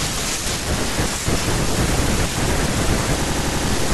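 A speech clip with a system hang loop from 3.24 s to 3.67 s. A single 85 ms slice of audio repeats exactly, five times, producing a machine-gun stutter at about 11.7 Hz instead of continuing speech. The playback hardware kept cycling through the same ring buffer after the host or driver stalled, and the loop length fits a 4096-sample buffer. Speech picks up again with essentially nothing skipped.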